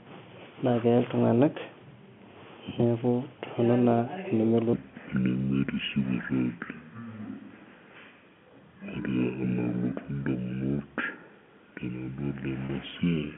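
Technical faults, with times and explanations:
4.73–13.37 s, section at the wrong speed: audio runs at 0.567 speed, roughly ten semitones lower. The spectrogram's harmonics sit compressed downward, likely from a mismatched playback clock.
12.66–12.69 s, packet loss with pitch repetition: one 30 ms gap is filled by a repeated pitch period, heard as a brief buzzy hold. The waveform shows identical repeating cycles.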